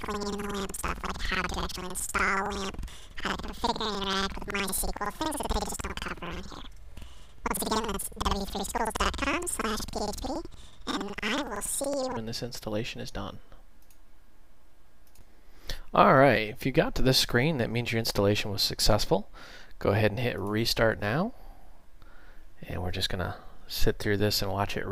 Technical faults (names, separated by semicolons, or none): planar audio read as interleaved